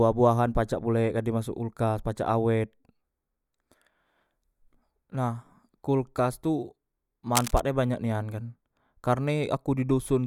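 At 7.35 s a burst of cable scratch noise breaks into the speech and lasts until 7.62 s. It sounds like a harsh, uneven rustle laid over the voice for about a quarter of a second. The bursts are dense and ragged, not a steady hiss. They sit only a little below the speech in level. The likely cause is a worn cable or connector being moved, making its contact resistance flicker rapidly.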